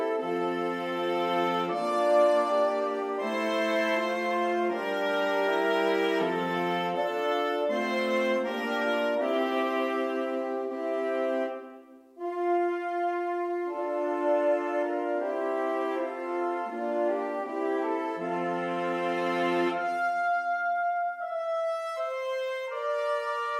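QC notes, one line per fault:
No audible faults found in this clip.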